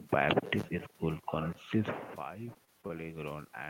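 From 2.33 s to the end at about 3.7 s, automatic gain rising is audible. After the input level drops by about 15 dB, the gain control lifts its gain gradually, so the speech and the room noise behind it swell together over more than a second.

Between 2.53 and 2.91 s, repeated packet loss produces a robotic sound. Four short gaps, the longest 24 ms, are each patched by extending the preceding sound. About a fifth of that stretch is synthetic fill, which makes the speech choppy.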